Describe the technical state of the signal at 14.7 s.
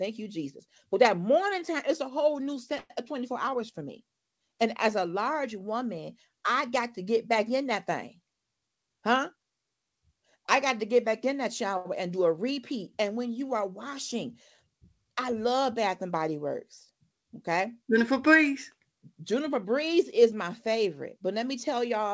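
At 14.7 s the speech is intact, with no fault present, and the call path's band limit means nothing is heard above 8 kHz.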